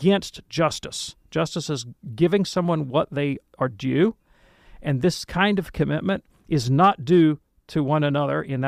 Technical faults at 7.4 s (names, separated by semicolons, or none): none